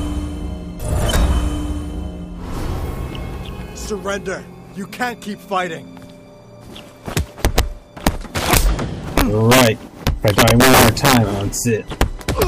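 Integer overflow cracks appear at 1.16 s, 7.17–7.59 s, 8.07 s, 8.51–8.57 s, 9.18–9.67 s, 10.07–11.17 s, 12.01 s and 12.42 s. Loud peaks, up to about 6 dB beyond full scale in the longest stretch, wrap to the opposite sign instead of being held at the limit, so each sample flips across the whole range. Clipping squares peaks off into a buzzy flatness. These wraps give harsh, violent snaps instead.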